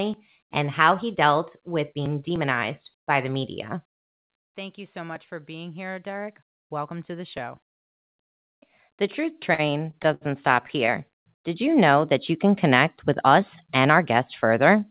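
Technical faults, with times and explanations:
9.54–10.23 s, repeated stalls (stutter): the speech drags and hiccups five times. Each catch holds the previous sound for up to 70 ms, about 150 ms in all, with nothing lost. Late packets kept emptying the jitter buffer, so the receiver stretched the last sound until data resumed.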